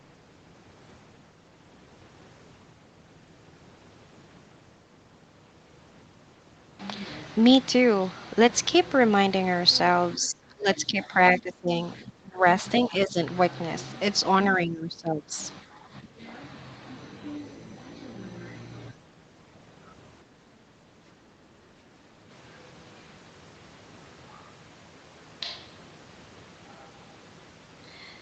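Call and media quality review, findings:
Speech suppressed in double talk: the talker dips and chops in six bursts, 10.15–11.16, 11.38–11.72, 12.03–12.45, 12.89–13.18, 14.57–15.38 and 15.72–16.21 s. They're worst at the start, down about 25 dB, and ease to about 10 dB later. The likely culprit is the echo canceller. With both ends talking, it can't tell our talker from loudspeaker echo and clamps the whole send path.

Switch to a distant microphone: from 22.3 s to the end, the voice goes roomy and hollow all at once. It drops about 5 dB and brings up room noise sitting only about 25 dB under the speech. It's likely that the close mic dropped out and the feed fell back to a farther pickup. The audio tops out at 8 kHz throughout, which fits wideband Opus at around 32 kbps.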